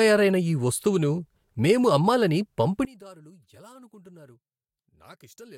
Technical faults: one channel inverted

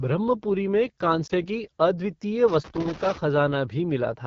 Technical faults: AMR wideband (HD Voice) codec; lost AMR speech frames; loose connector crackle

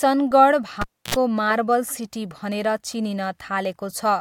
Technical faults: cable pulled and plugged in

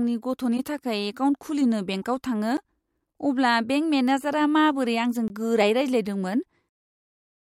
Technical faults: corrupt frame decoded; block of digital silence

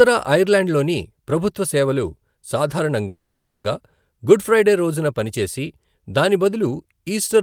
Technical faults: call audio freeze

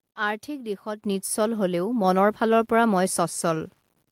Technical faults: low bit depth without dither; microphone volume stepped up

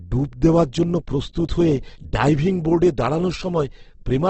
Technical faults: Opus compression

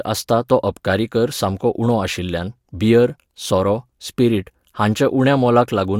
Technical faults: none

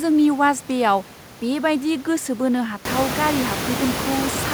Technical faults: none

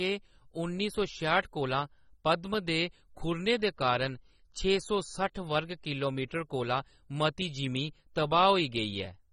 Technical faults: AAC compression

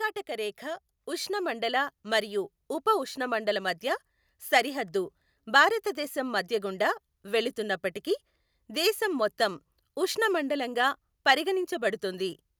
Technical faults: automatic gain rising

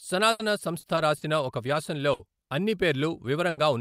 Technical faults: repeated packet loss (robotic sound); burst of packet loss; lost packet rebuilt from error correction

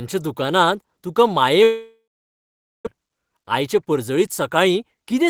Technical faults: long network dropout; jitter buffer speed-up

